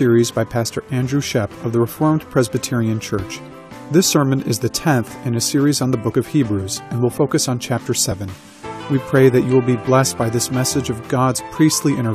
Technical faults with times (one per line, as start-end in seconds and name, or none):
1.22 overlap between stream segments
2.20 overlap between stream segments
3.19 overlap between stream segments
4.17 overlap between stream segments
6.15 overlap between stream segments
7.13 overlap between stream segments
8.11 overlap between stream segments